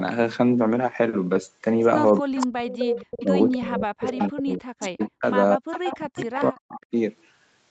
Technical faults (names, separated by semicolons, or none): echo leak; speech suppressed in double talk